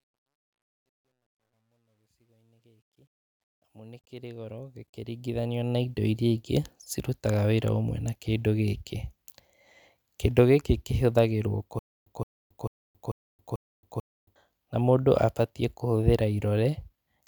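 A gain stage handling the opening fade-in kept too few bits and added no dither, so the quietest part of the ramp collapses into coarse square steps, which fits roughly 12-bit resolution. From 0.0 to 5.99 s the fade-in rises smoothly in level but carries truncation distortion. It is worst from 0.0 to 3.72 s, where the sound turns gritty. The grit eases as the level climbs.

A stutter with silent gaps follows from 11.79 to 14.36 s, right after "gĩkĩ kĩhũthagĩrwo". This was likely a stalled player or stream that replayed its last buffered fragment on each retry and then ran dry. A 168 ms burst repeats six times, every 442 ms, with about 273 ms of digital silence between repeats. The audio due in that span is lost, and the sound resumes at "na mũndũ abatiĩ kũhũthĩra".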